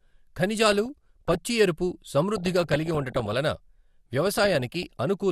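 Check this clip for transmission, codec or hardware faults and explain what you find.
Reception trouble shows up three times as DAB burbling: 0.66 to 1.38 s, 2.36 to 3.36 s and 4.21 to 4.97 s. Bit errors slip past error correction into the MP2 data, so sub-bands jump in level for up to a frame. You hear burbling blips of noise over the speech, worst in the middle stretch.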